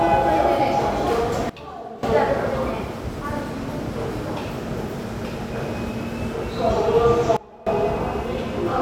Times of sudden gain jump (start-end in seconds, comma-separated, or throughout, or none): 1.50-2.03, 7.37-7.67